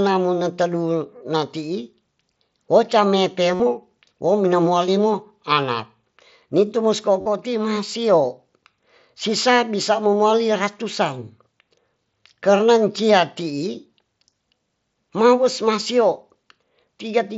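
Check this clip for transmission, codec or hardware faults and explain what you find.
Two short dropouts stand out, both concealed Bluetooth headset packet loss. The first runs from 3.54 to 3.60 s, about 52 ms, and the second from 7.21 to 7.26 s, about 45 ms. That length suggests six or seven headset frames went missing in a row. The phone filled each gap by repeating the best-matching slice of the last 20 ms or so of waveform. That's why you hear a brief buzzy, held tone at full level instead of silence, with a slight warble as real speech picks back up. It's all riding on the mSBC link's wideband sound, which carries a touch of grainy codec texture.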